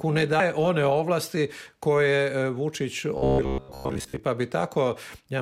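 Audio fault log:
0.37–0.40 s, damaged data in a compressed stream: a brief disruption in the sound, as the decoder misreads corrupted frames and loses sync until the next frame header.
3.18–4.20 s, robotic sound from repeated short buffers: a rigid, metallic 66.7 Hz buzz, likely from 15 ms buffers replayed while real audio is skipped, with around 70 percent of the span repeated.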